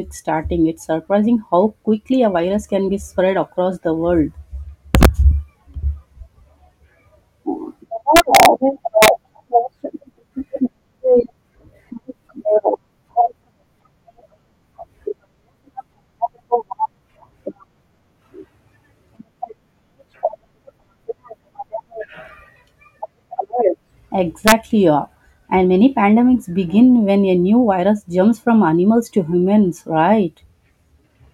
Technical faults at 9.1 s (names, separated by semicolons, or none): integer overflow